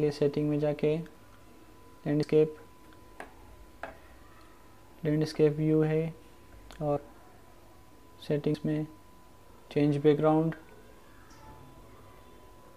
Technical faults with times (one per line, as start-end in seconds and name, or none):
0.00-12.76 USB whine
2.23 dropped buffer (overrun)
6.97 dropped buffer (overrun)
8.54 dropped buffer (overrun)